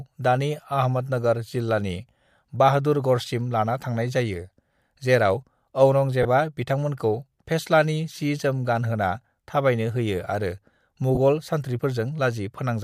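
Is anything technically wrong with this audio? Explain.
Yes, there are two kinds of fault in this speech clip.

Dropped samples at 3.41 s: a single sharp click. It likely comes from a fraction of a millisecond of samples going missing, so the waveform jumps straight from one value to a later one. The gap is far too brief to remove any of the speech, but the sudden step is heard as a clean, isolated tick and shows as a thin vertical line across the whole spectrum.

Lost LE Audio frames at 6.23 to 6.25 s and at 11.15 to 11.18 s: two short gaps of about 20 ms each, which fits two consecutive 10 ms LC3 frames failing to arrive over the Bluetooth link. The decoder covers each hole by reusing the last good spectrum with randomised signs. The voice briefly turns into a noisy smear instead of falling silent, then clears when real frames resume. Under what is likely LC3 coding there is a light grainy edge.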